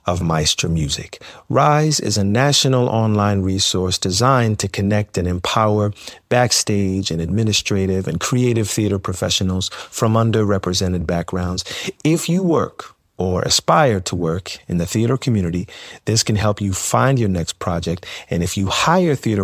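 No technical faults can be heard anywhere in the recording; the signal stays continuous and stable throughout.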